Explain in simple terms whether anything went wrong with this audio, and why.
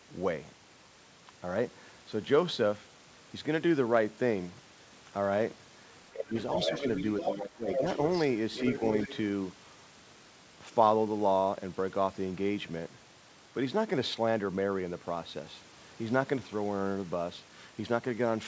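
Yes, two things went wrong, both in the call's echo cancelling. With both sides likely talking at once, it confused the talker with loudspeaker echo and turned everything down. This is speech suppressed in double talk: the voice dips sharply at 6.13–6.34 s and 7.35–7.84 s. It also likely failed to fully remove the loudspeaker sound, so there is the other side's voice leaking through as a second voice in the background at 6.37–7.03 s, 7.20–7.34 s, 7.72–8.25 s, 8.54–8.83 s and 9.02–9.16 s, fading away toward the end.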